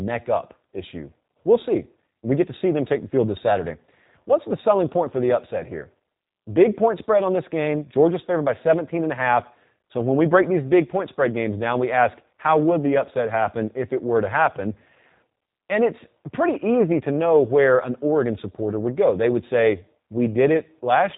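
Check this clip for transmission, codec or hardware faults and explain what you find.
One codec fault runs through the whole speech clip. G.729 coding at a rate consistent with 8 kbit/s rebuilds the speech from a filter model and sparse pulses, discarding everything above 3.8 kHz, so it sounds muffled, plainly rough and synthetic.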